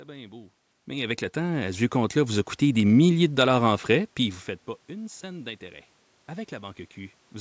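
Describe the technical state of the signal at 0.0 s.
At 0.0 s the speech signal is intact, carrying only the room's own background noise and the ordinary bass roll-off of the call microphone's high-pass filter.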